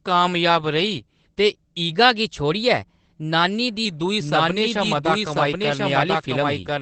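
Opus voice compression runs throughout the speech: nothing sounds above about 8.5 kHz, and the coarse SILK coding, consistent with roughly 12 kbps, leaves it plainly muffled and slightly hoarse. From 1.93 to 3.85 s, just after "कामयाब रेही ते", a drift correction step plays the audio 6.3% fast, raising pitch 106 cents before snapping back, likely a clock-matching buffer adjustment. From 4.20 s to the end, a doubled audio track adds a dry copy about as loud, trailing by roughly a second and starting abruptly, likely from a second capture path.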